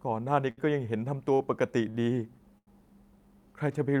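At 0.50 to 0.58 s, 1.34 to 1.40 s, 1.90 to 1.95 s and 2.58 to 2.68 s the speech hangs on one sound with a faint buzz or dip: a short stall from a late packet each time. The jitter buffer emptied, so the receiver stretched the last sound for 70, 44, 46 and 88 ms until the packet arrived. Unlike packet loss, the speech resumes exactly where it stopped and nothing is skipped.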